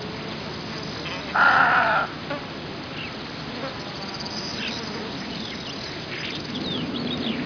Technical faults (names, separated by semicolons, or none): aliasing